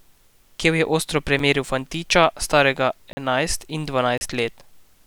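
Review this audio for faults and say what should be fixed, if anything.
Three blocks of digital silence cut the speech: a 7 ms tick at 1.39 s between "je ostro" and "fantiča starega enajst", a 40 ms hole at 3.13–3.17 s after "fantiča starega", and a 33 ms hole at 4.18–4.21 s. Each drops abruptly to silence and back with no fade. The waveform shows a near-flat line, and the spectrogram shows an empty gap. Give the audio path enough buffer headroom, or fix the processing so it always delivers valid samples on time, so that no block is ever written as zeros.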